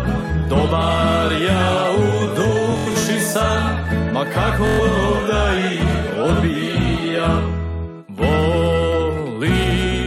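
Bluetooth stutter at 2.72–3.06 s and 4.67–4.81 s: lost packets make the receiver replay short slices, producing a buzzing stutter. About 160 ms and 120 ms of sound are skipped.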